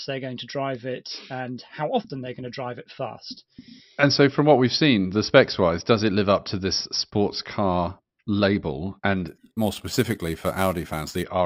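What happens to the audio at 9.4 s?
At 9.4 s the speech falls inside a stretch of imaging from sample-and-hold upsampling, from 9.28 to 11.23 s. Each sample was repeated with no smoothing filter, which fits a 12 kHz rate raised to 44.1 kHz. Mirrored copies of the spectrum appear, the first filling 6 to 12 kHz at about 17 dB below the speech. This adds a bright, metallic fizz that swells with the speech, its lowest copy moving opposite to the pitch.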